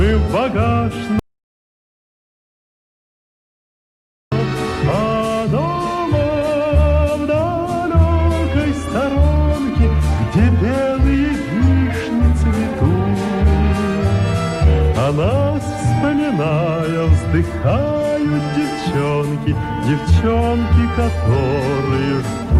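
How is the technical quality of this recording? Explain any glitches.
The recording has one clear glitch: an audio dropout to silence from 1.19 s to 4.32 s. The sound stops abruptly mid-flow and gives way to silence, with no room tone or background at all, then resumes just as suddenly. About 3.1 s of material is simply missing. The likely cause is a brief loss of the input signal, such as a disconnected device, failed link or accidental mute, while the recorder kept writing silence.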